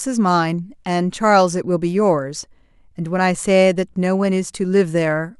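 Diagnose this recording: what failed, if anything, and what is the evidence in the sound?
Nothing failed; no fault is audible anywhere in the speech.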